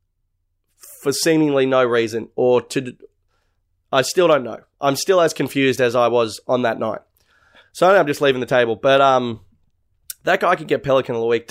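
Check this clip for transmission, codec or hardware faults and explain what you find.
There is one fault, a regular train of clock drift buffer slips. From 0.3 s to 10.7 s, about fifteen clicks recur every 0.87 s over the speech. They are likely caused by two clocks differing by a couple of hundred parts per million, so a buffer periodically drops or repeats a handful of samples. On a spectrogram they show as evenly spaced thin vertical broadband lines, and on the waveform as step discontinuities.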